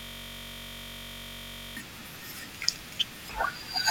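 From the very start to 1.77 s, the speech is caught in a system hang loop that is already under way when the clip begins. The system froze while the sound hardware kept replaying its ring buffer. A 21.33 ms piece repeats exactly, some eighty times. That length fits a 1024-sample buffer. Because the loop is so short, it sounds like a steady buzz at about 46.9 Hz rather than a stutter.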